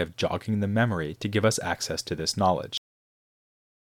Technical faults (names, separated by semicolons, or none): cut-off end